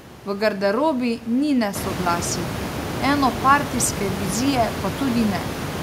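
No technical faults can be heard in the recording.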